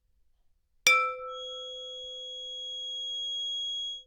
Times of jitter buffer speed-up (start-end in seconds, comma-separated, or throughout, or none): none